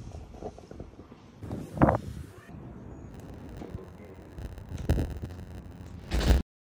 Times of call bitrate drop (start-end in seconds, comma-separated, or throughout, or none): none